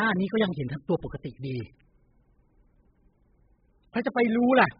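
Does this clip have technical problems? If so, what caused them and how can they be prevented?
Yes, the speech is dull and smeared for the whole clip, with nothing above about 5 kHz and a fizzy, warbling edge on sibilants. It likely comes from heavy AAC compression at a very low bitrate, around 8 kbps. Encoding at a much higher bitrate would prevent it.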